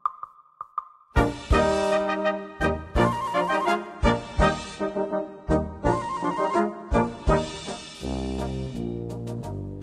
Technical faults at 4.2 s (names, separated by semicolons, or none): adaptive stream at a lower bitrate